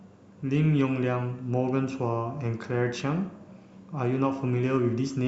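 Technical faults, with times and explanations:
No technical faults are audible anywhere in the speech.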